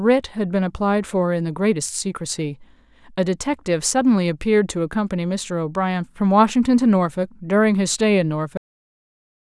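At 8.57 s the speech stops abruptly with a cut-off end: the final stretch of audio, running to 9.49 s, was never written out or played, so the signal ends partway through a sound rather than trailing off. There is no natural decay or room tail; the level falls straight to digital silence and stays there for the remaining 0.92 s. The effect is of playback truncated mid-utterance.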